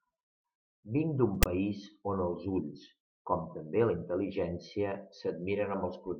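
At 1.43 s, lasting to 1.46 s, a brief harsh burst of static breaks into the speech just before "país on els ulls". This is file tags played as audio. A block of text tag data was decoded as if it were samples. The text bytes produce a loud, gritty rasp with its waveform pushed well off the centre line, and the zero padding that follows drops to dead silence. On a spectrogram it shows as a hard-edged broadband column, then an empty gap.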